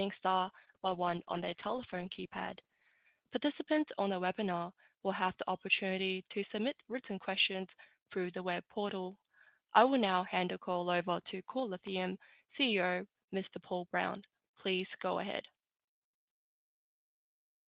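From 0.47 s to 2.99 s the audio goes through a call bitrate drop: the bandwidth estimate fell, and the encoder was forced to squeeze the signal into far fewer bits. The sound degrades in a way that points to a fall from about 32 kbps to about 13 kbps, held for roughly two and a half seconds. It turns rough, watery and muffled. On a spectrogram the upper frequencies thin out or stop at a ceiling, and the detail that remains looks smeared and blocky until the rate recovers near 3 s.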